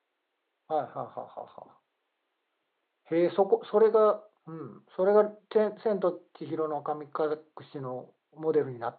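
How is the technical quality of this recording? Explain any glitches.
The technical quality of this recording is good, with no glitches to explain; the faint room noise sits about 53 dB below the speech.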